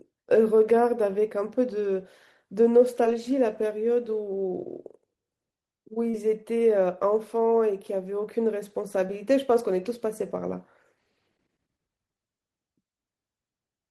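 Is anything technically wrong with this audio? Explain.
Yes. There is short concealed packet loss at 3.03 s, 6.10 to 6.14 s and 9.07 to 9.09 s, where roughly 10, 30 and 10 ms of the speech never arrived in time. The decoder extended the preceding sound to bridge each gap, giving a brief smear or wobble rather than the clean silence of a plain dropout.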